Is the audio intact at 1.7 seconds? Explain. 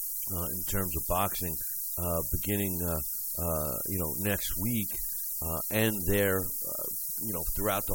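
No. At 1.7 seconds the speech carries low bit depth with noise shaping, and this runs through the whole clip. The signal is quantized to just 4 bits. The rounding error is fed back so that most of it is pushed toward high frequencies. The result is a steady, thin hiss that climbs sharply toward the top of the band. That hiss sits about 5 dB above the speech.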